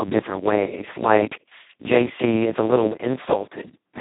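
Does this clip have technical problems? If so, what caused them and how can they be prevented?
Yes. Heavy Speex codec damage runs through the whole clip. The speech sounds hoarse, buzzy and close to robotic, which points to Speex at its lowest quality setting, around 2 kbps, where almost no bits are left to describe the excitation and the codec behaves nearly like a vocoder. On a spectrogram the harmonics look smeared and noisy, and everything stops abruptly at about 3.8 kHz, with an empty band above. To prevent it, record or transmit with a modern codec such as Opus at a higher bitrate.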